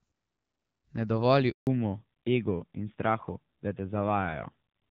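Speech over a mobile call, and you can hear it go through a network switch partway in. At 1.51 s there's a handover gap: the voice drops out quickly and stays silent for about 160 ms, until 1.67 s. While the phone was hopping networks, no speech frames made it across, so whatever was said in that window is simply gone rather than muffled or smeared. Right after, at 1.67 s, the sound falls back to narrowband and stays that way to the end. Before the gap it has that open HD Voice quality, with the light coding texture you'd expect from AMR-WB at a mid rate like 12.65 kbit/s. After it, everything above 4 kHz is missing and the voice turns duller and rougher. That's consistent with the new link negotiating down to AMR-NB at a low rate, around 7.4 kbit/s, and losing the wideband codec along with the extra bandwidth.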